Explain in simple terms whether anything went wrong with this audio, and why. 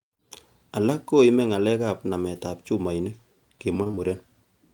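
Near the end, from 3.83 to 3.99 s, the speech turns choppy and robotic: that's repeated packet loss. Four short gaps, none longer than 20 ms, were each patched by stretching the previous sound, covering about half that stretch. Unlike a single dropout, it stutters repeatedly.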